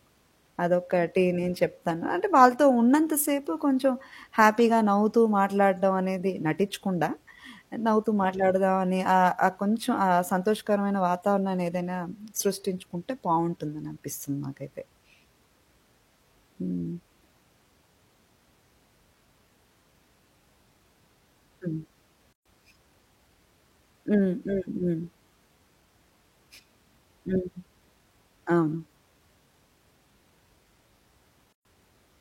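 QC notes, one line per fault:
22.33–22.46 s and 31.53–31.65 s, gap at a join of encoded pieces: the speech drops into silence for about 127 ms and then about 124 ms, with smeared edges, before picking up right where it left off. Separately encoded chunks were butted together untrimmed, so each encoder's start delay and last-frame padding stayed in.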